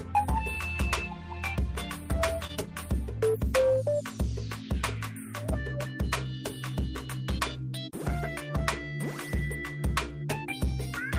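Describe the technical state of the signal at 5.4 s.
At 5.4 s the signal is intact, with no dropout, distortion, glitch or other technical fault at that point.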